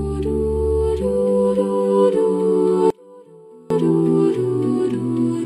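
From 2.90 to 3.70 s the sound collapses by about 27 dB to a faint residue, likely one channel inverted cancelling in mono; unlike a dropout, a faint remnant persists.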